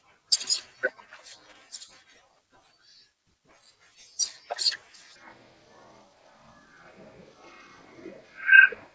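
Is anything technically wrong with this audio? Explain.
Yes. From 5.16 s to the end, the speech suddenly drops to a deep, dragging growl, slowed to one third of normal speed and pitched about 19 semitones lower. This is a wrong sample rate fault: the samples are being played out at a rate other than the one they were captured at, with no conversion in between, so speed and pitch fall together by the same factor. A one-third ratio fits 48 kHz audio being played at 16 kHz.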